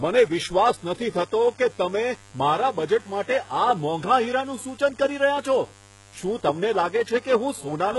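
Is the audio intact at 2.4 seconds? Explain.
No. At 2.4 seconds the speech carries mains buzz, present for the whole clip. Switching spikes twice per 50 Hz cycle spread harmonics up to several kHz. The result is a steady, raspy buzz about 25 dB below the speech.

The treble is also heavily damaged throughout, likely by HE-AAC compression. Only the lower band is coded. Treble is rebuilt by copying lower bands upward, so harmonics misalign. S sounds turn gritty or lispy. Nothing remains above 11.5 kHz, which fits a bitrate near 12 kbps.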